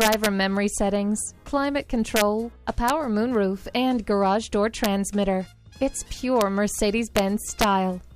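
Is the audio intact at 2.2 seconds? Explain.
No. From 2.16 to 2.22 s there is integer overflow: the signal was driven about 2 dB past the largest integer value, and instead of being limited, those peaks wrapped around to the opposite sign. Each wrapped sample jumps across the full range, producing a violent crack far harsher than ordinary clipping.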